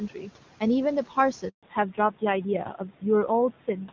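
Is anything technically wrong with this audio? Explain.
Yes, three things. The whole clip has noise suppressor artifacts. The suppressor pulls what it judges to be steady noise down by about 12 dB, frame by frame, so the background drops away between phrases and creeps back under the speech.

At 1.49 s there's a handover gap lasting 140 ms, until 1.63 s. The call was being passed between networks and no speech frames arrived during the switch. The voice cuts out almost instantly, there's dead silence, and whatever was said in that window is simply gone.

Right after, from 1.63 s to the end, there's a fallback to narrowband. The call drops from HD Voice to an older codec, and the sound points to a low-rate AMR-NB setting, around 7.4 kbit/s. Nothing above 4 kHz survives, so the speech turns duller and rougher than before.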